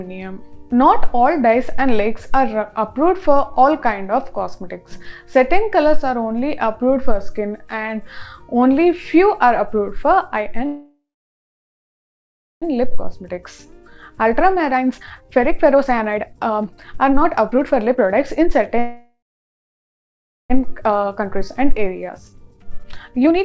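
At 10.66 s the audio stops moving forward. This is a call audio freeze. The last sound carries on briefly as a fading buzz, then falls to silence for about 1.6 s. Playback resumes at 12.64 s from exactly where it stopped. About 2.0 s of gap has been inserted, and nothing is lost. The likely cause is packets held up in transit, so the jitter buffer ran dry. The same happens again from 18.79 s to 20.52 s, a 1.71 s freeze with about 1.3 s of silence.

Each freeze is followed by a jitter buffer speed-up. The late packets arrived together, and the receiver then carried too much delay. To shed it, the receiver cut out many short pitch-period slices in a row. From 12.84 s to 18.76 s the audio runs at 129% speed with unchanged pitch, dropping roughly one and a half seconds. From 20.68 s to the end it runs at 128%, trimming under a second. Both stretches sound rushed. Throughout, the band stops at 8 kHz, which fits G.722 at 64 kbps.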